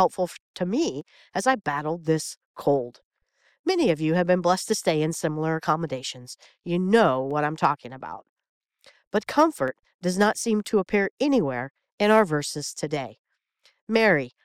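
A brief crackle on a speech peak at 0.01 s, just before "to me as I", is hard clipping: the peak ran about 1 dB past what the signal path could hold, so its top was cut flat, adding harsh high harmonics. A sharp single click follows at 1.01 s, then another at 2.26 s, right after "me as I battled", and more at 4.78 s and 7.31 s. These are dropped samples, likely a fraction of a millisecond of signal missing, so the waveform jumps abruptly from one value to a later one without removing any audible sound. The crackle returns at 7.65 s, where the overload is about 2 dB, and again from 9.39 to 9.43 s, ending just before "does not seem to", at about 1 dB. A further click is heard at 9.68 s. A longer stretch of clipped peaks from 12.11 to 12.20 s, about 1 dB over, brings the crackle back, and a last click lands at 13.70 s.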